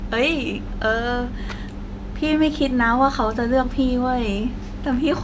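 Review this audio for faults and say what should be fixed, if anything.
No faults can be heard in this speech recording. Nothing in it needs to be fixed.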